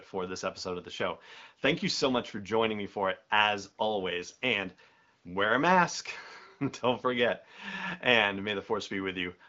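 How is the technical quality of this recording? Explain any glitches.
The technical quality of this recording holds up, with no glitches to explain.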